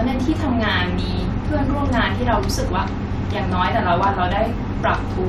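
No technical faults can be heard anywhere in this speech recording. There is nothing here that needs a timestamp or further comment.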